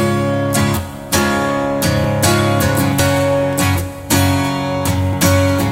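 At 1.18, 2.04, 3.0 and 5.13 s the sound jumps ahead: likely dropped buffers (overrun), skipping roughly 20 ms each, 50 ms at 3.0 s. The waveform shows abrupt splices with no gap.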